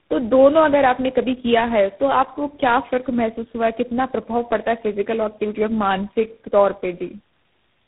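From start to finish, the speech carries tandem speech coding damage. The audio passed through several speech codecs in a row, each decoding and re-encoding the output of the one before. Errors stack up at every hop. The sound fits a chain of about three low-rate coders, such as AMR, GSM and G.726, bridged by plain telephone links. The speech is rough, muffled and warbly. Nothing remains above about 3.8 kHz.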